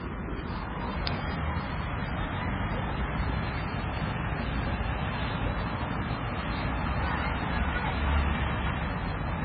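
Throughout, the sound is dull, with nothing above 5 kHz and a flat ceiling on a spectrogram: likely low-bitrate audio saved at a high bitrate.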